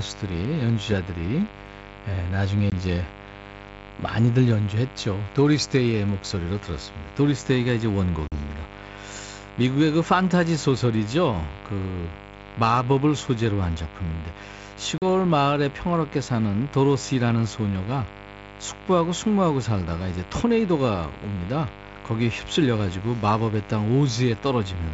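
A mains buzz runs through the whole clip. It sits roughly 15 dB below the speech. Switching spikes enter twice per cycle on a 50 Hz supply. Their harmonics climb into the kilohertz range. The result is a steady, raspy buzz.

Packet loss on an ADPCM call appears at 2.70 s, 8.28 s and 14.98 s. Each gap is hard-edged silence, lasting 20 ms, then 40 ms, then 40 ms. The first fits one lost packet, the others two. Afterwards the decoder's predictor and step size no longer match the sender's. Speech returns slightly distorted, settling within tens of milliseconds. The wideband coding keeps speech clear around these holes.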